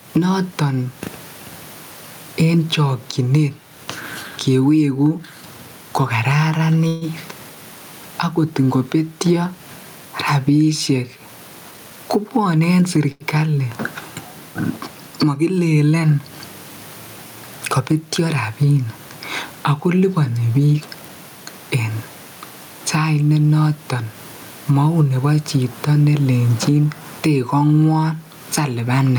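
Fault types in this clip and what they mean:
Gain pumping: The level breathes up and down by roughly 15 dB all through the speech. The room noise sits about 41 dB below the speech. The likely cause is gain set far too high, with a fast limiter pulling it down on every peak. Unlike a one-off dropout, this squashing never lets up, so loud and soft passages sit unnaturally close together.
Call audio freeze: From 6.87 to 7.04 s the audio stops moving forward. The last sound carries on for about 141 ms as a buzzy, fading continuation, without dropping to silence. When the delayed packets arrive, the speech resumes exactly where it paused, so nothing is lost and a gap has simply been inserted. This likely comes from the jitter buffer running dry. It differs from the later short stall because it is longer and the filled sound decays into buzz rather than just holding.
Jitter buffer speed-up: The speech is hurried twice without any change in pitch. 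From 11.71 to 12.98 s it runs at 111% speed, trimming about 150 ms. From 20.54 to 21.09 s it runs at 116%, trimming about 100 ms. The receiver cuts tiny pitch-period slices repeatedly to drain excess buffered delay. Because pitch stays put, this is distinct from a resampling or playback-rate error, which would raise the pitch along with the speed.
Short stall from a late packet: At 13.12 to 13.23 s a single late packet leaves the buffer empty, and the current sound is held for about 86 ms before the speech picks up from the same point. Nothing is missing. It sits just after the first speed-up and is briefer and steadier than the freeze at 6.87 s, sounding like a stretched syllable rather than a fading continuation.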